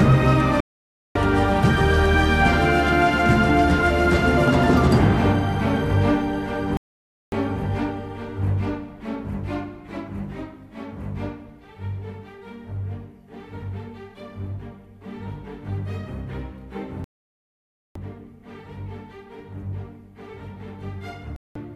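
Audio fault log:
0.60–1.16 s, 6.77–7.33 s, 17.04–17.96 s and 21.36–21.56 s: digital broadcast dropout. The audio cuts to silence four times, for 0.55 s, 0.55 s, 0.91 s and 0.19 s, then resumes further along the programme with nothing from the gap recovered. The receiver stopped getting decodable frames and muted until valid ones arrived again. The hole lengths point to whole 24 ms frames being discarded.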